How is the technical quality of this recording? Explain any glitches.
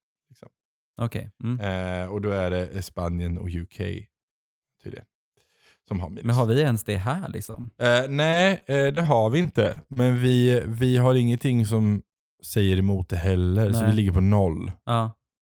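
The recording has one clear glitch in the speech, between 7.15 and 10.18 s: repeated packet loss, which gives a robotic sound. It starts just after "har vi ens det" and clears by "vi vi har ingenting." Over those three seconds the audio breaks up eleven times, with the longest hole lasting 33 ms. About 240 ms of sound goes missing in total. Each hole is bridged by stretching the last bit of sound forward. Roughly 400 ms ends up patched this way, so the audio turns choppy, with pieces missing. A single dropout would pass as one brief hiccup. Here the holes keep coming close together across the stretch.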